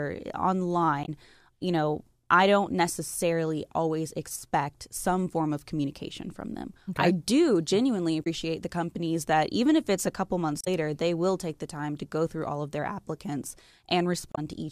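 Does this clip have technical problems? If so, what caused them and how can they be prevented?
Yes. Damaged data in a compressed stream causes brief glitches at 1.01–1.09, 8.20–8.27, 10.61–10.68 and 14.32–14.39 s. Corrupted bytes make the decoder lose sync and skip ahead. Prevent it with checksummed, error-protected transmission and storage.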